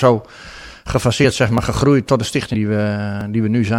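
At 1.58 s, just before "gegroeid tot de", samples were likely overwritten before being read, a dropped buffer (overrun), so the speech snaps forward, losing roughly 10 ms. At 2.53 s, right after "gegroeid tot de", compressed frames were skipped, about four of them, which fits a 26.1 ms frame length. The speech jumps ahead by around a tenth of a second. At 3.21 s another dropped buffer (overrun) joins the sound directly, giving a skip of about 30 ms.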